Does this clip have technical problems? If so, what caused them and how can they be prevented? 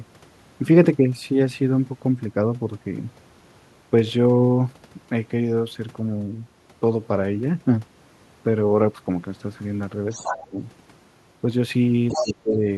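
Yes. An echo canceller likely failed to remove loudspeaker pickup, so the other side's voice leaks through at 10.1 to 10.48 s (about 10 dB below the speech) and 12.08 to 12.34 s (only about 5 dB below). Using a headset or better acoustic echo cancellation would prevent this.

When both sides talked at once, the canceller likely could not separate them, so speech is suppressed in double talk. The voice drops by roughly 15 dB at 10.29 to 10.61 s and 12.18 to 12.62 s. A double-talk-aware echo canceller, or a headset that removes the echo path, would prevent this.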